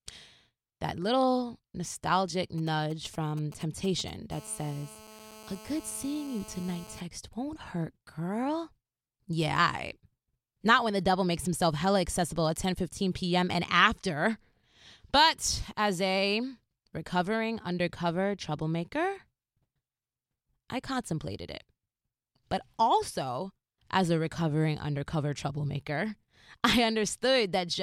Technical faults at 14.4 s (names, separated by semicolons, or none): none